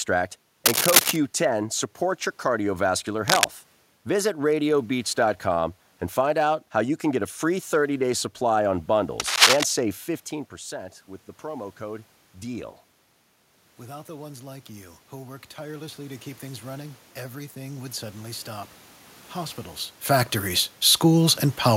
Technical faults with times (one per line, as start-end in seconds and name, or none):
0.65-1.16 cable scratch noise
3.27-3.44 cable scratch noise
9.20-9.65 cable scratch noise
13.79-18.75 automatic gain rising